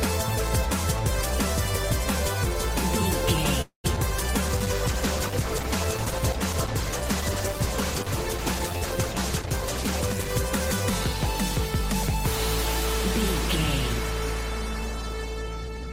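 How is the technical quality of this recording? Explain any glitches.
The recording has three glitches, all falling between about 3.6 and 10.4 s.

From 3.61 to 3.86 s, a call audio freeze: the sound stretches into a fading buzz, then about 110 ms of silence. This is likely a stalled jitter buffer. Nothing is lost, unlike a dropout.

At 3.96 to 3.98 s, short concealed packet loss: about 20 ms never arrived and was patched over, leaving a brief smear. It is too short to be a freeze.

From 4.47 to 10.36 s, a call bitrate drop from 32 to 12 kbps makes the sound muffled and watery. It is a sustained change, not a momentary break.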